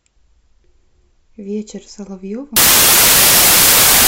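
From 2.56 s to the end, the speech becomes samples built from the wrong bytes: misordered bytes turn low bits into loud broadband noise, filling the spectrogram.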